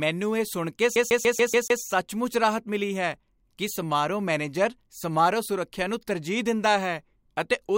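From 0.96 to 1.82 s, after "ਇਹ ਸੁਣ ਕੇ", the CD is stuck on one turn: a 144 ms loop repeats six times with brief mutes at each jump, before "ਰਾਹਤ ਮਿਲੀ ਹੈ ਕਿ".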